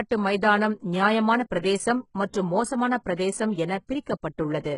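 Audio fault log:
Throughout, HE-AAC compression, heavy: the treble sounds gritty and metallic, and sibilants turn lispy. Nothing is heard above 11 kHz. The likely cause is rebuilt treble copied up from lower bands, which fits a very low bitrate near 12 kbps.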